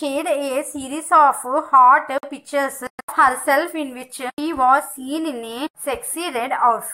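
At 2.18 s a gap at a join of encoded pieces opens: about 50 ms of silence until 2.23 s, with softened edges. Separately encoded pieces kept their start delay and end padding. Unlike a dropout, nothing is lost; the sound resumes exactly where it stopped.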